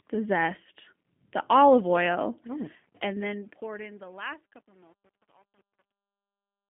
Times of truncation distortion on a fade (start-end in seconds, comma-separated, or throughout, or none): 2.68-6.69